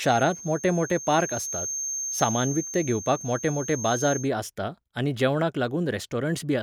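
From the start of the speech to 4.30 s, a feedback whistle sits behind everything. It is a thin, steady tone at 6.4 kHz, roughly 10 dB below the speech, and its level swells and fades slowly. The likely cause is a loudspeaker-to-microphone loop held just at the edge of feedback. One frequency keeps ringing without building up. The whistle stops just before "आसता आनी जेवणाक".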